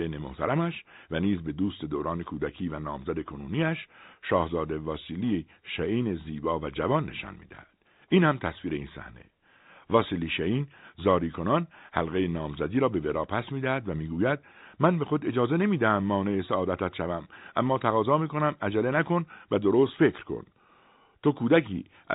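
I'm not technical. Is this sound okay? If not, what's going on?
Yes, the sound is fine: it is ordinary telephone-quality speech carried through G.711 telephone coding, so nothing above about 3.8 kHz comes through, which is normal for a phone line and not a problem.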